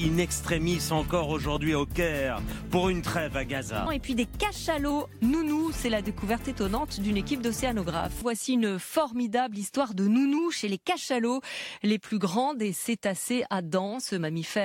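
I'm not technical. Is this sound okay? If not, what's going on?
No. From 3.46 to 4.91 s and again from 10.38 to 10.97 s, the sound speeds up about 6% and rises roughly a semitone, then snaps back. This is a drift correction step, likely software syncing two clocks by briefly changing playback speed.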